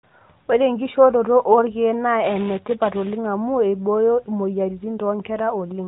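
From 2.24 s to 3.26 s a robotic buzz at 345 Hz rattles through the speech. This is buffer tearing: writer and reader of a ring buffer have slipped, so a small slice of each period, which fits a 128-sample buffer, replays audio about 10 ms old.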